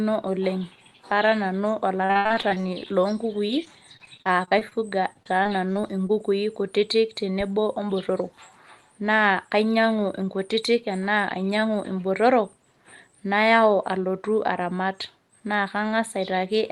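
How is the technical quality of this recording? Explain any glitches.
The recording has audible glitches early on: three choppy stretches of repeated packet loss (robotic sound), at 2.05–2.88 s, 3.47–4.73 s and 5.13–6.11 s. Packets kept going missing. Each hole was patched by stretching the previous sound, so the audio turns choppy, with pieces missing. The longest gaps are 76 ms, 35 ms and 27 ms, so the first stretch is the roughest. The call-codec path limits the top end to about 12 kHz.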